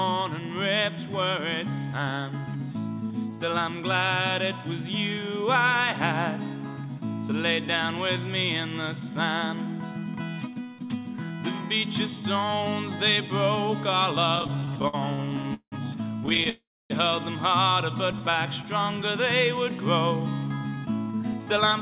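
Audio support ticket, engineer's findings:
Repeated stalls (stutter), 14.36 to 15.74 s and 16.26 to 16.47 s. Audio drags and stutters, with 18 then 5 short holds filled by continuing the last sound, longest 180 ms. Jitter buffer repeatedly running dry on late packets. Nothing lost, only stretched.

Call audio freeze, 16.49 to 16.92 s. The sound holds and fades, then goes silent for about 270 ms before resuming where it stopped. Likely a packet delay emptying the jitter buffer. A 407 ms gap is inserted and the delay rises by the same amount.

Jitter buffer slow-down, 18.31 to 19.03 s. Playback runs at 95% speed with the pitch unchanged, and sounds are drawn out. The buffer is rebuilding its reserve by repeating single pitch periods, adding 40 ms over the span.

Jitter buffer speed-up, 20.76 to 21.80 s. The audio is hurried at 109% speed with the pitch held. The buffer is trimming excess delay by cutting pitch-period slices, around a tenth of a second in total. 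The narrowband call path, with nothing above 4 kHz, fits G.711 A-law at 64 kbps.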